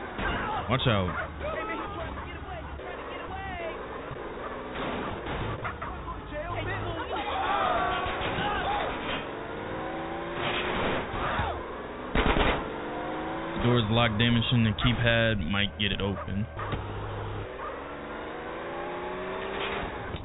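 No faults can be heard; the audio has come through a call path and carries nothing above about 4 kHz, a narrowband limit that fits a telephone codec such as G.711 A-law.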